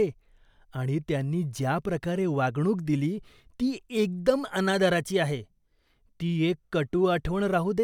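No technical faults can be heard anywhere in this recording.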